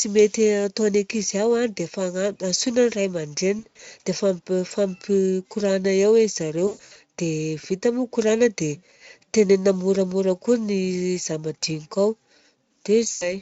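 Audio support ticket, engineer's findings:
VoIP packet loss concealed by the speech codec: three dropouts, 3.59–3.81 s, 6.67–6.96 s (worst, longest gap about 120 ms), 13.11–13.37 s. Speech smears into a buzzy tone or coloured noise that fades where the Speex decoder (light damage) extrapolates its last pitch, then stays weak briefly after recovery.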